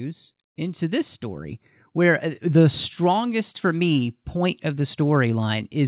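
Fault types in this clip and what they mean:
Automatic gain rising: the gain control judged the input too quiet and eased its gain up by about 6 dB from 0.56 to 2.72 s, so the speech and the background swell together, all within the call path's phone band with nothing above 4 kHz.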